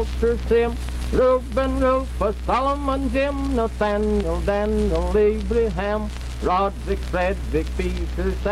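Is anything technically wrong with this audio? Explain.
No, nothing stood out as technically wrong on listening.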